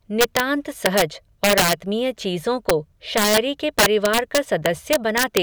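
Speech with integer overflow: peaks pushed past the integer limit wrap to the opposite sign, giving violent cracks at 0.21–0.40, 0.86–1.02, 1.44–1.73 (about 8 dB over), 2.69, 3.18–3.38 and 3.79–5.37 s. On the waveform they show as sudden sign flips, and on the spectrogram as broadband vertical streaks.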